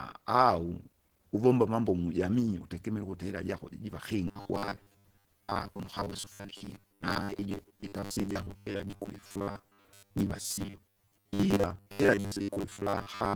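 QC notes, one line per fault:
throughout – Opus compression: the speech has a muffled, hoarse quality with rough, grainy texture, and plainly audible codec damage while content still reaches about 20 kHz. This likely comes from Opus in its hybrid speech mode at a low rate, consistent with roughly 16 kbps.
4.28–13.35 s – robotic sound from repeated short buffers: from here to the end, the speech becomes a rigid metallic buzz at 100 Hz that still loosely tracks the speech. This is likely a 10 ms block being replayed in place of missing audio, with around seven-tenths of the material repeated rather than new.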